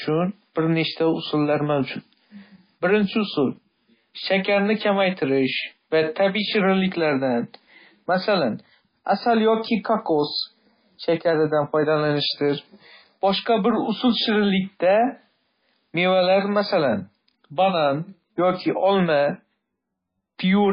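From start to end, the speech sounds watery and swirly, with nothing above 5 kHz. These are likely heavy MP3 compression artefacts. The low band-limit and flickering detail fit a very low bitrate, near 18 kbps. S sounds chirp metallically.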